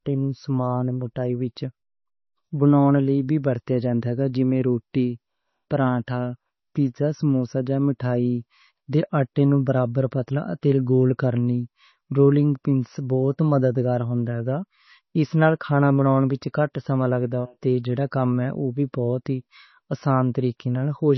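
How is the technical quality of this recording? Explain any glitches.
The recording is heavily degraded by what sounds like strong lossy compression running through the entire speech clip. MP3 compression is the likely cause: the treble stops dead at 6 kHz, which fits a very low bitrate around 24 kbps. With so few bits, the encoder discards weak frequency components that flicker in and out between frames, giving the sibilants a watery, swirling, metallic edge and blurring consonant onsets. A spectrogram would show a flat ceiling at 6 kHz with empty space above it, and patchy, blocky gaps in the upper bands beneath.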